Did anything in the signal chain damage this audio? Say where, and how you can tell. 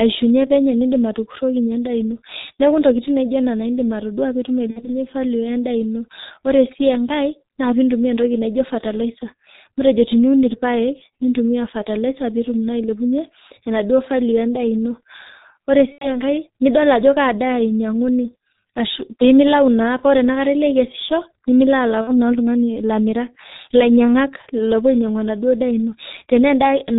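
Yes. Codec stage: the G.723.1 codec muffles and hoarsens the speech throughout. A spectrogram shows nothing above 4 kHz, and consonants blur, which fits a roughly 6 kbit/s mode.

Network stage: VoIP packet loss concealed by the speech codec at 4.71–4.99 s (after "edim atodua pee etum"), 15.92–16.20 s and 22.01–22.37 s. The decoder stretches its last pitch and filter into a fading buzzy tone or coloured noise, visible as a tapering envelope.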